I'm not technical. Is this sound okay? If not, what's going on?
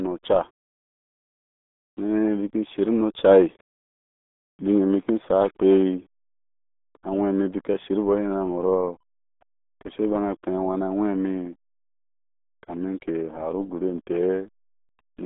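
No. From start to finish the speech has the RealAudio 14.4 codec sound, an old dial-up format. Everything above about 3.8 kHz is gone, so it's muffled, and heavy squeezing adds a gargly, bubbling sound. A plain telephone line would sound muffled but clean.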